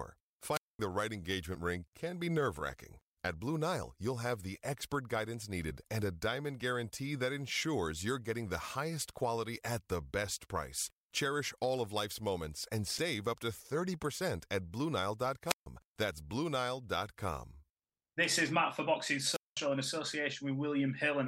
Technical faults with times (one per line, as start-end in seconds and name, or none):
0.50-0.79 wireless microphone squelch dropout
15.46-15.66 wireless microphone squelch dropout
19.27-19.58 wireless microphone squelch dropout